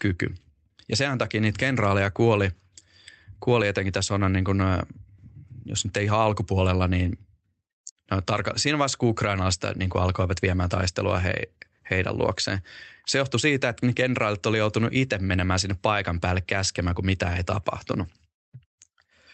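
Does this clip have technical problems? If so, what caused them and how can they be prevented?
No, there's nothing wrong with this speech clip, so there's nothing to prevent; it just carries the normal sound of an Opus call path at 24 kbps, with the top end rolled off above about 8 kHz.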